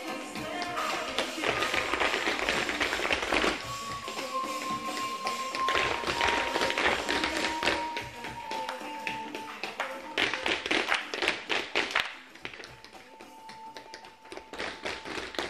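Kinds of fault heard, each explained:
No faults are heard anywhere in this audio.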